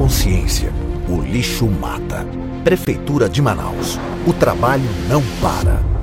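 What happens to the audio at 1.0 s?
Nothing goes wrong at 1.0 s; the audio is intact at that moment.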